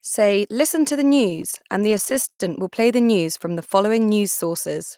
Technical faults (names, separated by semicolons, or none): repeated stalls (stutter)